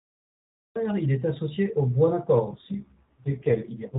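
The audio opens with a cut-off start. Digital silence fills the first 0.76 s. Then the sound begins abruptly, mid-phrase, just before "il est associé aux". There is no natural attack or fade. The capture simply started late.

At 2.46 s an AMR rate drop sets in and lasts to the end. The band stays narrow, capped near 4 kHz as with the AMR narrowband mobile codec throughout, and there is no gap. The speech turns rougher, buzzier and more synthetic. That fits a fall from 12.2 to 4.75 kbps.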